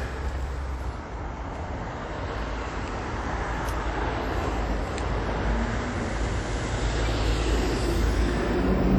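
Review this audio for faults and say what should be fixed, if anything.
Throughout the sound there is a ringing, washy quality, with a hiss that swells and recedes along with the material and a smeared edge around sharper events. The content stops sharply at about 19.5 kHz. The likely cause is WMA compression: its long transform blocks spread quantisation noise across tens of milliseconds around each event. The plainly audible damage points to a low bitrate near 48 kbps, where quieter spectral lines are discarded. To prevent it, keep an uncompressed or high-bitrate master and encode with a modern codec at a generous bitrate.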